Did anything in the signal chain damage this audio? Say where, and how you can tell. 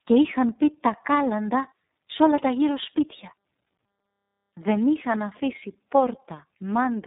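Yes. The damage is at the codec stage and lasts the whole clip. This is tandem speech coding: two low-rate speech codecs in a row. The sound fits a G.729A link handing off through G.711 A-law to an iLBC link. Each border decodes and re-encodes the speech, so each coder models artefacts left by the last. The result is rough, muffled and warbly. Nothing reaches above 3.8 kHz.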